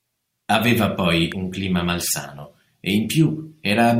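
At 1.32 s, just before "un clima malsano e", a single sharp snap cuts across the speech, peaking at roughly -15 dBFS. This is an electrical switching spike: a brief transient riding on top of the signal rather than replacing it, so the speech continues underneath without a gap. The cause is likely a nearby switch, motor or static discharge arcing, with the audio line picking up the discharge as a near-instantaneous impulse.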